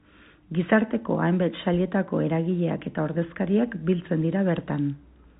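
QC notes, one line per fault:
Telephone-band speech, no faults heard.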